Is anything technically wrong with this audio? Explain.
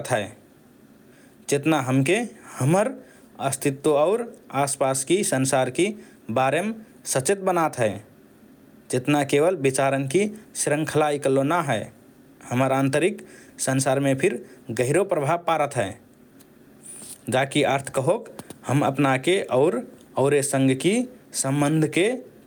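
Yes, there's gain pumping all the way through this speech. The gain swings by around 10 dB, pulled down each time the talker gets loud. That's likely the input gain set far too high with a fast limiter or compressor clamping down on each peak, so everything sounds squashed.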